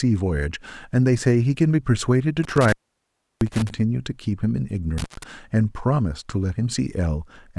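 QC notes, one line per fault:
2.43–3.70 s: intermittent contact. A loose connection opens for about 690 ms, so the speech drops out with crackle at both edges and faint hiss underneath.
4.98–5.23 s: intermittent contact again. A shorter break of about 130 ms, with the same crackling cut and brief hiss as the contact momentarily separates.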